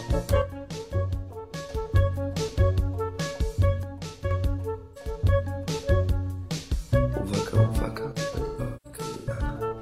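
At 0.42 s the level of the music drops suddenly by about 6 dB and stays down until 1.69 s. It does the same from 3.83 to 4.31 s, and there's a very short dip from 8.12 to 8.18 s. The likely cause is one channel dropping out. When the stereo is folded to mono, the material shared by both sides loses half its contribution, so you hear that sharp 6 dB step. Anything that lived only in the missing side vanishes for the duration.

Between 4.79 and 5.07 s there's AAC frame loss with concealment. About 171 ms of audio is missing, which fits four lost frames. The decoder papers over the gap by reusing the last good spectrum. The result is a brief smeared, noisy or phasey patch rather than a clean gap.

From 8.46 to 9.43 s the frame loss comes back harder. Around 555 ms is gone, which points to 13 frames, spread over roughly 940 ms. The longest run is about a fifth of a second. You get repeated patches of that smeary concealment, broken up by stretches of real signal.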